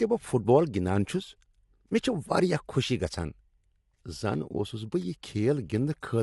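Throughout, the speech sounds plainly rough and grainy, with nothing above 11.6 kHz. This is likely low-delay AAC compression, whose short frames resolve harmonics poorly, consistent with AAC-ELD near 32 kbps.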